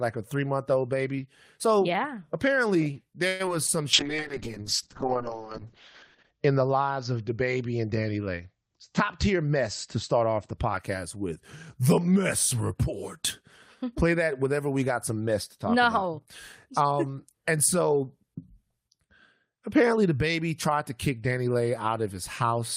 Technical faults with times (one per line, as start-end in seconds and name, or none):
3.27-3.42 call audio freeze
3.46-3.70 short concealed packet loss
3.94-10.63 call bitrate drop
8.98-10.96 jitter buffer speed-up